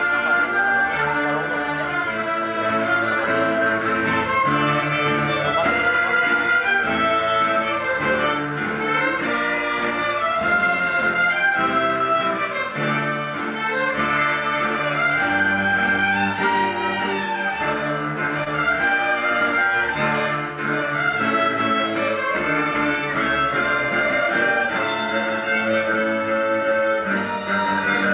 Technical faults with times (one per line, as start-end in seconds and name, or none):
18.44-18.48 short concealed packet loss